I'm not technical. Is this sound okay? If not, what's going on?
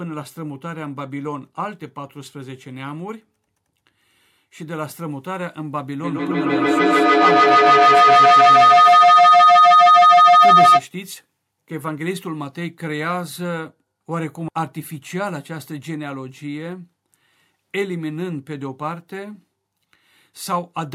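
No. From 6.0 to 10.9 s there's feedback howl: a high whistle that grows louder. Unlike an echo, it builds rather than fading away.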